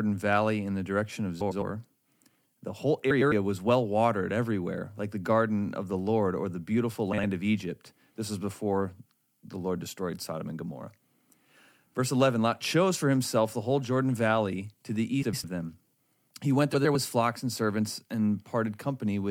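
Frames out of order: neighbouring runs of frames were decoded in swapped sequence, so brief stretches play with their halves exchanged, a garbled flutter, losing no time. This happens at 1.41 s after "in the direction of", at 3.10 s just before "was well watered everywhere", at 7.13 s, at 15.23 s after "to the", and at 16.74 s. Each swapped half lasts about 105 ms, except at 7.13 s, where the halves are 52 ms.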